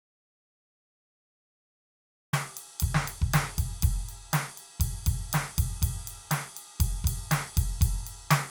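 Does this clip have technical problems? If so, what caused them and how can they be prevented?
Yes: an audio dropout to silence runs from the start to 2.33 s, likely a lost input writing silence: a flat waveform line and an empty spectrogram before the music begins mid-flow. Secure cables and monitor input levels before recording.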